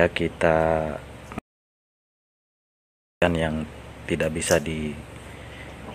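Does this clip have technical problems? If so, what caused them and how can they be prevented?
Yes. The input feeding the recorder was most likely lost for a moment, through a loose connection, a dropped wireless or network link, or an accidental mute, while writing continued with silence. That produces an audio dropout to silence from 1.39 s to 3.22 s: the sound stops abruptly mid-flow and resumes just as suddenly, leaving about 1.83 s of silence with no room tone, and whatever occurred in that stretch is lost. Securing cables and links, and monitoring input levels during capture, would prevent it.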